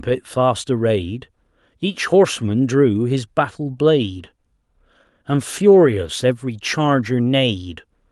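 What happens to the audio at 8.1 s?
Nothing goes wrong at 8.1 s; the speech is intact at that moment, with no dropout, click or distortion.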